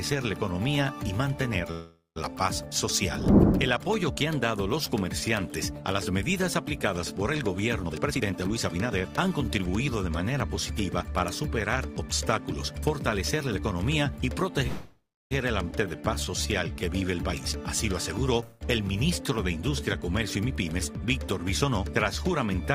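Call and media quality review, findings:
Call audio freeze, 1.71–2.18 s: last sound held as a fading buzz, trailing into about 170 ms of silence, then resumes where it stopped. Likely delayed packets draining the jitter buffer; 445 ms gap inserted, nothing lost, delay grows 445 ms.
Call audio freeze, 14.67–15.33 s: same fading buzz, ending in about 310 ms of silence. Likely jitter buffer underrun from late packets; 638 ms concealment inserted, no audio missing, latency up 638 ms.
Call audio freeze, 18.43–18.63 s: brief buzz with no silent stretch before playback resumes. Likely short packet delay emptying the buffer; 174 ms fill inserted, nothing dropped.

Jitter buffer speed-up, 7.83–9.67 s: sound runs hurried at unchanged pitch, 124% speed. Receiver trimming repeated pitch-period slices to shed excess buffered audio; roughly half a second removed.
Jitter buffer speed-up, 17.15–17.69 s: milder rush at the same pitch, 114% speed. 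Buffer over target again; repeated small cuts remove about a tenth of a second.

Skip ahead, 15.71–15.73 s: abrupt forward jump, sides joined with only a 7 ms bridge. Stretch of audio dropped in transit or by the jitter buffer on overflow; roughly 0.3 s missing, delay drops by about that much.

Jitter buffer slow-down, 15.84–16.82 s: sound drawn out at the same pitch, 84% speed. Receiver repeating single pitch periods to rebuild its reserve; 164 ms added.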